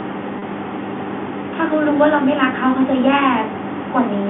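Packet loss with pitch repetition at 0.39 to 0.42 s drops about 30 ms of the speech, which fits a single lost packet. The receiver fills the gap by repeating the last pitch period, so the sound briefly holds with a slightly buzzy quality before resuming, all within the telephone band.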